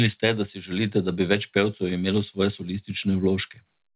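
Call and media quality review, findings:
Nothing to flag here: the speech comes over the call path as ordinary narrowband telephone audio with nothing above 4 kHz, which fits a G.711 A-law link at 64 kbps.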